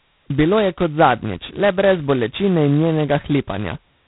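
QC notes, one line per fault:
Throughout: G.726 ADPCM, heavily degraded, consistent with the 16 kbit/s mode. A harsh, rasping hiss rides on the speech and rises and falls with its level, because each sample's prediction error gets only two bits. The band stops near 3.9 kHz. That level-tracking rasp is what separates it from steady background noise.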